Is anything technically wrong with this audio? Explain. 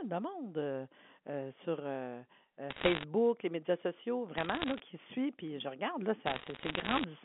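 Yes. Three bursts of sharp ticking crackle sit over the speech at 2.70 to 3.04 s (just before "les médias sociaux"), 4.38 to 4.80 s (between "les médias sociaux" and "qui suit"), and 6.26 to 7.04 s (after "je regarde là"). These are bit errors on a digital phone line: flipped bits on the A-law telephone line each corrupt a single sample, and hits on sign or high-order bits spike into audible ticks. The error rate runs roughly 1.5 percent, lighter in the middle burst at about 0.7 percent.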